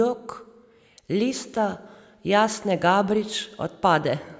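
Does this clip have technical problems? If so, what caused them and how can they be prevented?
No, nothing in this speech recording stood out as a technical problem on listening, so there is nothing here to trace back or prevent.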